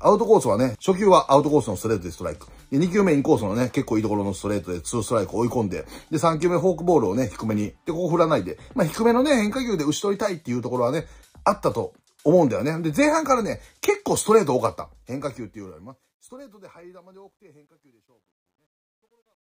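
From 14.50 s to the end, the fade shows truncation distortion: the gain stage, which fits a 12-bit path without dither, rounds the fading tail into square steps. It sounds gritty, worst from 16.91 s, with stepped waveforms and spreading spectrogram grain.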